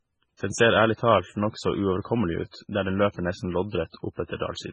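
From start to finish the speech has a hard ceiling, with nothing above about 10.3 kHz, and a watery, swirling texture that's heavy the whole way. That's most likely MP3 compression squeezed very hard, which fits a bitrate around 16 kbps. Short of bits, the encoder chops the treble at a fixed point and drops the weaker frequency lines, and those lines blink in and out between frames. That churning is the swirl you hear, and attacks come out smeared.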